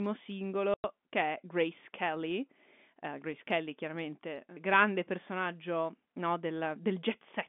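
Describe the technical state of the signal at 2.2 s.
At 2.2 s the signal is intact, with nothing wrong beyond the ordinary narrow telephone band, roughly 200 Hz to 3.5 kHz, of the G.711 line it was carried on.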